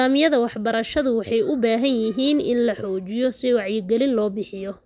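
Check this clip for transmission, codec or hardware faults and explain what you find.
I find no faults to report in this clip.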